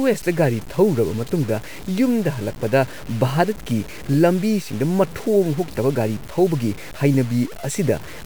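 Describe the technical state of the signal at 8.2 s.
At 8.2 s the speech shows the same grainy, signal-following distortion heard across the whole clip, likely low bit depth without dither, consistent with truncation to about 6 bits. The rounding error tracks the waveform, sitting only around 20 dB down, so quiet passages turn gritty and sputtery.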